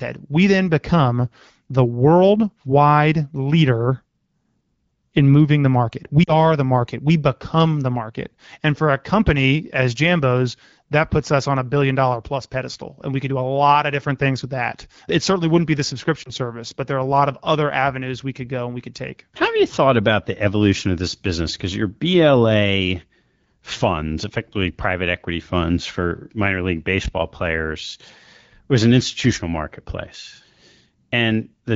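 Around 6.23 to 6.33 s there's a short dip, and again from 16.24 to 16.31 s a briefer warble. Both are lost AMR speech frames: the frames got corrupted over the radio link, so the decoder bridged the gap by repeating its last good pitch and vocal tract settings at dropping gain. The first sounds like about 40 ms of patched audio, two 20 ms frames; the second, a single frame. The glitches occur on an otherwise clean-sounding AMR-WB stream.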